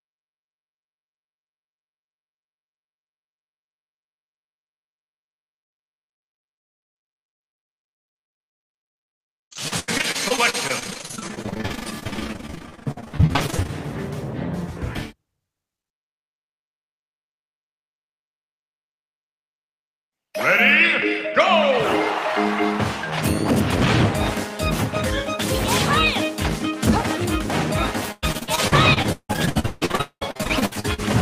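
From 28.12 s to 31.00 s the audio breaks up with repeated packet loss, giving a robotic sound. Data kept going missing or arriving late. Each hole was bridged by stretching out the last good sound, and the next hole soon followed. There are close to thirty gaps, the longest about 0.2 s, and concealment covers roughly half of that span. The result is choppy, with pieces missing. On a spectrogram, frozen, smeared bands repeat in short blocks. The waveform shows copied cycles broken by abrupt joins.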